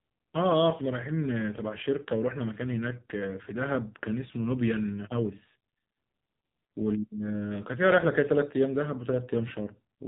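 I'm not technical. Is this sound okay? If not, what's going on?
No. Throughout the clip, the speech has passed through an AMR narrowband mobile codec, the old phone-call compression, squeezed very hard. It throws away everything above about 3.8 kHz and rebuilds the voice from a rough model, so it sounds muffled, buzzy and artificial.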